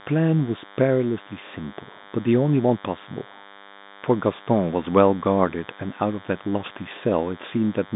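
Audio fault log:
Throughout: DECT cordless phone buzz. A thin, steady buzz runs under the speech, roughly 25 dB below it. A nearby DECT handset or base sends a radio burst every 10 ms, and the audio circuitry rectifies it into a 100 Hz pulse train. On a spectrogram, evenly spaced horizontal lines at 100 Hz and its harmonics persist through pauses up to the telephone band edge near 3.8 kHz. Between phrases, the waveform shows a small ripple repeating every 10 ms.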